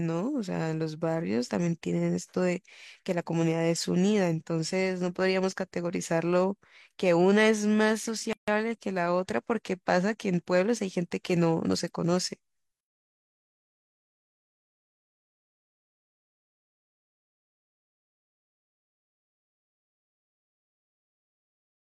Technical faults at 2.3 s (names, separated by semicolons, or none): none